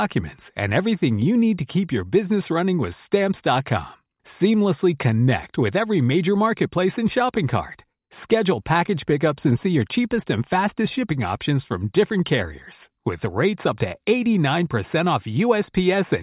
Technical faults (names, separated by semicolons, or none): none